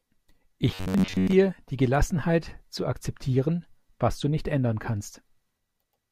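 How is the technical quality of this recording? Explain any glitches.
The recording has one clear glitch, from 0.69 s to 1.33 s, where the speech turns into robotic sound from repeated short buffers. For those roughly 0.64 seconds the voice becomes a rigid, metallic buzz pitched at about 94 Hz that only loosely tracks the speech. The likely cause is audio arriving too slowly, so playback keeps looping a segment of about 10.7 ms, which fits that buzz rate, for most of the stretch while the real audio is dropped.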